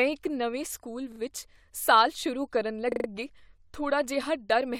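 A short stutter breaks the speech at 1.12 to 1.2 s, then a longer one at 2.92 to 3.08 s. Each is a repeated buffer: new audio arrived late, so the same roughly 40 ms piece replayed, twice then four times, with a hard join at every repeat.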